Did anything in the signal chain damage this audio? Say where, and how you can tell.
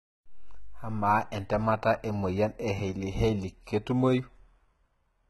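Yes. HE-AAC compression throughout, codec stage: gritty, lispy sibilants and nothing above 11.8 kHz, likely treble rebuilt by band replication at a bitrate near 16 kbps.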